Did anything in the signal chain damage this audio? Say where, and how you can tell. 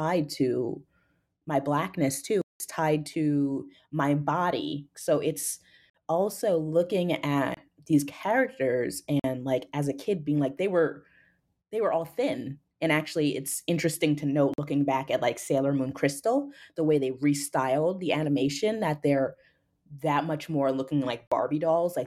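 Yes, the speech drops out six times into hard digital silence, a block of digital silence each time, at the driver or buffer stage. The longest runs 2.42 to 2.60 s, about 186 ms, between "my blackness" and "tied to my body". Shorter holes sit at 5.90, 7.54, 9.20 (after "these characters"), 14.54 and 21.27 s (after "that much more looking"). Most last about 46 ms, one about 26 ms. Each time the sound cuts out and back with no fade. Those repeated lengths fit 2048-sample buffers going unfilled in time, with the long one matching 8192 samples.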